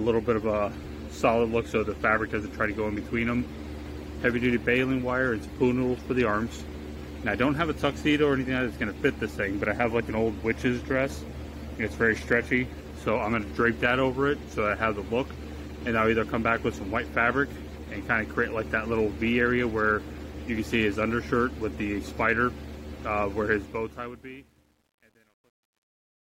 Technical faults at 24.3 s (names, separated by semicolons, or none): truncation distortion on a fade